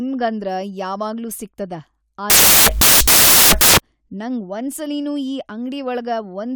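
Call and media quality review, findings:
Samples built from the wrong bytes, 2.3 to 3.78 s, just after "ಯಾವಾಗ್ಲೂ ಸಿಗ್ತದ". Loud, harsh broadband noise replaces the speech, close to white on louder sounds. Decoder or reader byte assembly: order swapped or off by one byte, so the fast-changing low bits become the dominant part of each value.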